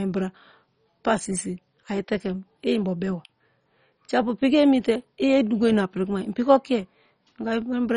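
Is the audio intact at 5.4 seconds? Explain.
No. At 5.4 s the speech carries the same damage heard throughout the clip, most likely from MP2 compression at a very low bitrate, consistent with about 32 kbps. With too few bits, the upper sub-bands shut off entirely, leaving nothing above 10.4 kHz. The bands that remain are coarsely quantised, giving a dull, gurgling, granular texture. A plain low-pass filter would sound dull but clean. Here the surviving bands flicker and grind.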